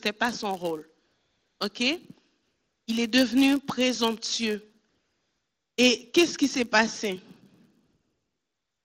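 From the start of the speech to the end, a block size mismatch (padded) is present. One stage hands over blocks slightly shorter than the next stage expects, and the shortfall in each block is filled with zeros. These regular micro-gaps produce a buzz at about 99.6 Hz that sits under the whole clip. Because the silence stretches the timeline, the audio runs slow by a factor of 0.996 while keeping its timbre.

AMR comfort noise appears in four pauses: 1.06 to 1.60 s, 2.42 to 2.87 s, 4.89 to 5.78 s, and 7.85 s to the end. In each, the phone stopped sending speech frames, for 540 ms, 440 ms, 880 ms and about 1.04 s respectively. The receiver filled those gaps with synthetic noise. The real background drops out and a smooth, steady hiss switches in, then switches back out when speech frames resume. The AMR wideband link carries the speech itself cleanly.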